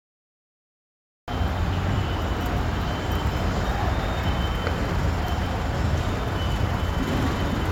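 The clip opens with a cut-off start: pure digital silence from 0 to 1.28 s, then the sound enters abruptly, already mid-event, because capture began late. Unlike a slow fade-in or a mid-clip dropout, there is no rising attack and the gap occurs only at the start.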